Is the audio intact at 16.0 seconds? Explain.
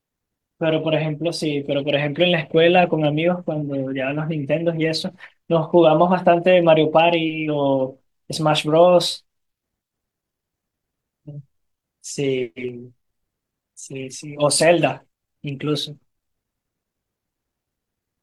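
Yes, at 16.0 seconds the audio is intact, with no dropout, glitch or other fault at that moment.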